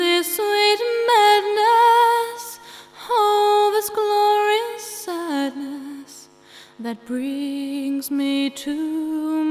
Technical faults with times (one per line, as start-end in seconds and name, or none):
none